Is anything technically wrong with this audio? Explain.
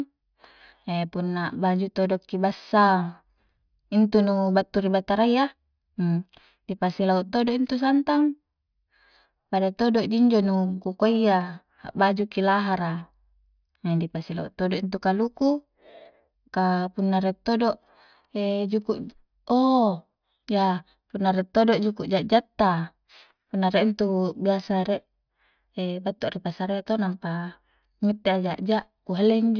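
No, there is nothing technically wrong with this speech recording. No fault can be heard anywhere in it.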